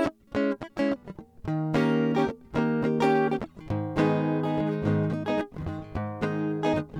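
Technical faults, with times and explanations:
Nothing technical trips up this music anywhere, so there's no fault to point to.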